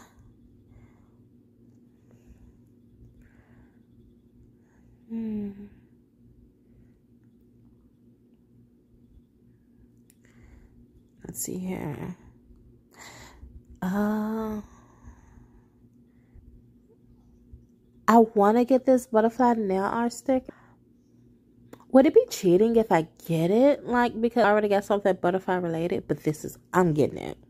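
Damaged data in a compressed stream shows up as four very short blips, at 13.08 s, 16.37 s, 20.48 s and 24.43 s, each under 20 ms long. At each point part of the encoded data arrived corrupted, so the decoder could not make sense of the affected frame, lost its place in the stream and had to hunt for the next valid frame header. That brief failure is heard as a chirp, squawk, click or short hole in the audio.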